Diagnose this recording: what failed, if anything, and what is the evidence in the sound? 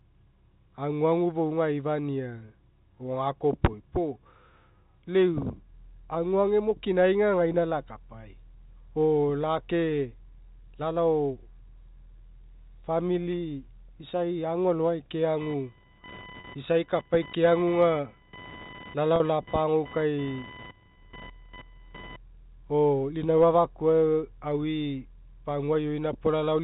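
The network stage failed, with packet loss with pitch repetition heard three times in the telephone-band speech. At 7.52–7.54 s a 20 ms gap is bridged by a briefly held, buzzy repeat of the last pitch period, which fits a single lost packet. At 16.40–16.44 s and 19.16–19.20 s the gaps are 40 ms, pointing to two consecutive packets. The receiver looped the final voiced cycle and faded it before normal speech resumed.

Computer activity noise enters through the analogue wiring from 15.41 s to 22.16 s, starting just after "famili isai agualogai". A buzzing, chirping pulse train with a rate of around 1 kHz sits roughly 20 dB below the speech and follows something other than the talker's level. Load changes in the computer modulated the shared ground of the audio circuit, and that current leaked into the signal path. The G.711 telephone coding underneath it passes the band-limited speech with no more than faint coding noise.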